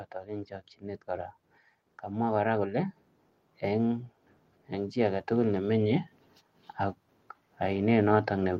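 From 4.71 s to 6.07 s the level climbs steadily, a case of automatic gain rising: the gain control judged the input too quiet and pushed its gain up by about 3 dB over roughly 1.4 seconds. The speech and the background noise swell together rather than the voice alone getting louder. On a waveform the envelope widens smoothly across that span, and a spectrogram shows every band, noise floor included, brightening evenly.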